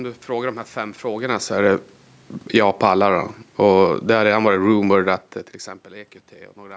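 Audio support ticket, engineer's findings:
Automatic gain falling, 2.40–2.85 s: level drops about 6 dB over roughly half a second, room noise sinking with it. AGC in call mic chain judged input too loud or its noise too strong, pulled gain down. Again 3.53–5.09 s, slower ramp of about 5 dB ending just before "att till". Same gain stage backing off. Separate from the talker's own distance change near 5 s.

Automatic gain rising, 2.76–3.37 s: overlaps the first drop. Speech and background swell together by about 4 dB over about 0.6 s. AGC reacting to the lowered level as too quiet and raising gain again. The talker's shift near 1 s is acoustic and precedes it.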